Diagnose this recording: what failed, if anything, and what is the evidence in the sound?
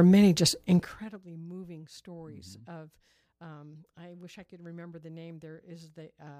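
A gain change failed in the level-control stage, applied in steps with no smoothing, producing zipper noise. From 0.76 to 1.16 s, between "many just" and "moving stories", the sound drops by roughly 25 dB through audible 2 dB steps at around thirty per second, heard as a fine ticking riding on the fade. Each step is an abrupt jump in gain, and those discontinuities click. The step rate points to the gain being updated once per buffer instead of ramped per sample.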